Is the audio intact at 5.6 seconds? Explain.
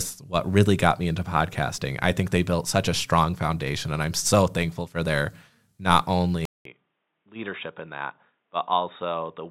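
Yes, at 5.6 seconds the speech plays through intact, with no dropout, click, glitch or other fault at that point.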